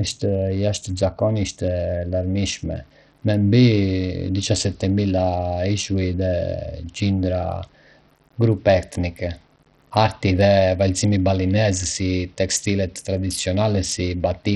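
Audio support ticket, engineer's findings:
Bluetooth SBC compression, whole clip: speech treble flickers and drops out, gritty aliased haze over the top. Likely cause is a heavy-damage SBC link, which fits about 64 kbps. Coarse sub-band bit allocation starves the upper bands. Unlike requantisation grain, the damage tracks frequency, not level.

Low bit depth without dither, 1.64 s to the end: grainy distortion that grows as speech gets quieter, and quiet tails sputter toward silence. The noise sits about 40 dB below the signal, which points to roughly 9-bit rounding. Unlike the SBC grit, it follows level across all frequencies.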